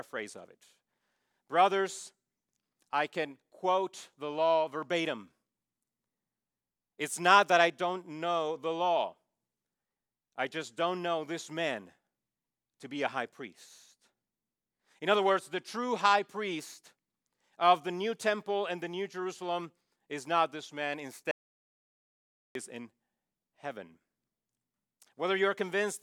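At 21.31 s, right after "is not this man", the speech hits an audio dropout to silence lasting about 1.24 s, until "is in" at 22.55 s. The input was likely lost and silence written. It cuts out mid-flow with no room tone, showing as a flat waveform and a blank spectrogram band.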